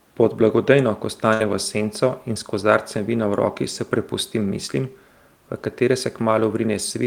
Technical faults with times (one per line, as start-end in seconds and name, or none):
1.33-1.43 burst of packet loss